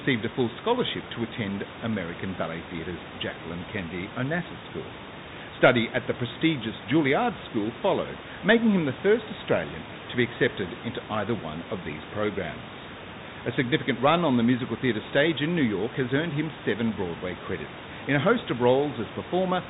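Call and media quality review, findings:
Bluetooth CVSD headset codec, whole clip: speech capped near 4 kHz, scratchy s sounds, granular hiss, fits a 64 kbit/s CVSD link where one-bit slope tracking falls behind fast, loud highs. Room noise sits about 17 dB under the speech.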